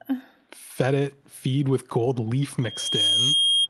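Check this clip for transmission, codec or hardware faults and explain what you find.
Two faults are present: brief echo leak and a loudspeaker feedback squeal, heard over an Opus call path whose spectrum stops near 12 kHz.

Echo leak, 2.15–2.22 s and 2.80–2.90 s: a very faint copy of the speech returns about 0.44 s late, likely from a far-end echo canceller missing loudspeaker pickup. On a spectrogram it appears as weak, repeated harmonic traces.

Loudspeaker feedback squeal, 2.62–3.68 s: microphone-to-speaker loop gain exceeds one at 3.2 kHz. The tone swells within half a second to slightly above the speech, showing as a bright horizontal spectrogram line and a growing waveform envelope.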